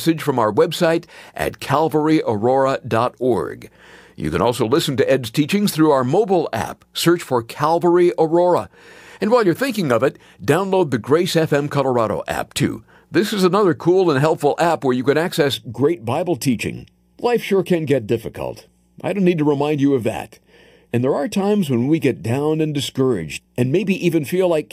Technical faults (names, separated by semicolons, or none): channel delay (comb filtering)